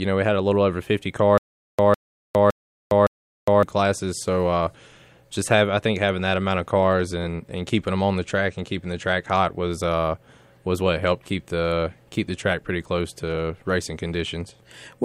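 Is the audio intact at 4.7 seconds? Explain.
Yes, the speech at 4.7 seconds plays through cleanly, with no dropout, click, distortion or other fault at that moment.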